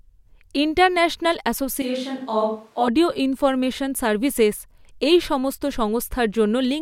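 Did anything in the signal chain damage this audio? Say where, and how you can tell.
Yes: a switch to a distant microphone at 1.82–2.88 s, likely a dropped close-mic feed. The speech suddenly turns roomy, thin, about 5 dB quieter and noisier.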